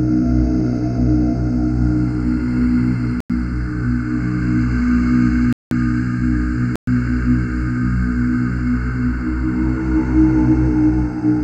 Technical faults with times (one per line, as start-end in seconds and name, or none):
3.20-3.30 block of digital silence
5.53-5.71 block of digital silence
6.76-6.87 block of digital silence